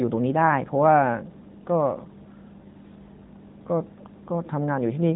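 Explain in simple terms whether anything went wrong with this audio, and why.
Nothing went wrong with this audio. It was carried through an AMR narrowband mobile codec, the standard phone-call system, which leaves the usual phone-line sound with nothing above about 3.8 kHz and only light traces of the coding.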